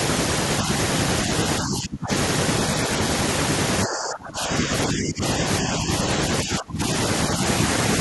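Speech suppressed in double talk, likely from an echo canceller muting the talker during crosstalk, dips the speech at 1.61–2.11 s (roughly 25 dB), 3.85–5.44 s (about 20 dB), 5.61–5.9 s (slight) and 6.43–6.82 s (roughly 25 dB).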